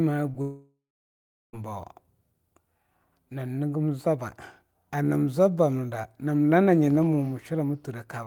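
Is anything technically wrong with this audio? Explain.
Yes, there are two faults near the start of this speech clip.

Short concealed packet loss, 0.31 to 0.36 s: about 20 ms of audio failed to reach the decoder in time, and the receiver covered the gap by carrying the preceding sound forward, from its pitch if voiced or as shaped noise if not, before crossfading back into the real signal. It is heard as a brief smear or wobble, and a tiny slice of the sound is lost.

Long network dropout, 0.42 to 1.55 s: roughly 1.1 s of audio goes missing. The last sound is stretched into a buzzy or hissy, fading continuation, and about 0.74 s of that span is plain silence before the speech resumes further along, with the intervening material gone. The likely cause is a stall in delivery long enough that the receiver's concealment ran out and could only mute until fresh audio arrived.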